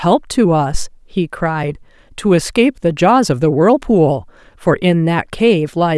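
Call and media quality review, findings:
Deep low-frequency thump, 0.74 to 0.92 s, peaking around -5 dBFS with a fast decay of about 39 ms. Phantom power thump: supply switched on or off on a live mic input, voltage step passing through the coupling capacitors into the speech path.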